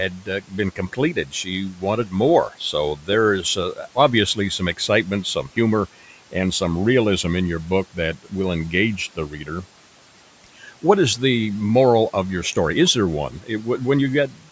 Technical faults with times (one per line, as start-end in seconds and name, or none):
0.09-5.57 speech cut by the noise suppressor
9.16-9.65 speech cut by the noise suppressor
10.44-10.83 speech cut by the noise suppressor
13.31-14.49 speech cut by the noise suppressor